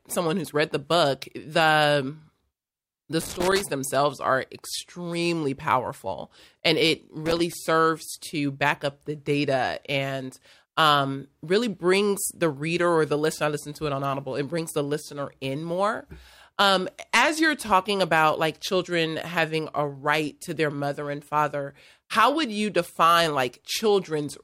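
A worn or dirty contact in the signal path is making and breaking as it shifts, which produces loose connector crackle twice in this speech. From 3.21 to 3.63 s, just before "themselves are extremely powerful", the feed is chopped into an irregular burst of scratchy crackle. It returns from 7.26 to 7.53 s, right after "extremely powerful and it", as a shorter, similarly ragged spatter.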